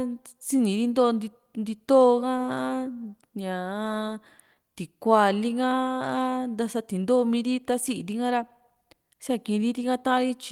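Clock drift between sender and receiver runs through the whole clip: the sender's audio clock runs about 3 percent slow against the receiver's. Because samples arrive slightly more slowly than they are played out, the receiver's jitter buffer keeps draining and has to be topped up. The result is speech that never quite settles into a steady pace, with small timing hiccups recurring at uneven intervals rather than at any regular rhythm.

Repeated timing corrections follow from that drift, running from 0.34 s to 10.09 s. To keep from running dry, the receiver repeatedly duplicates short pieces of audio, always stretching and never cutting, so the speech plays at about 97 percent of its natural rate. Together these repeats add roughly a third of a second. They are heard as faint stutters and a slightly dragging, unsteady tempo scattered unevenly through the speech.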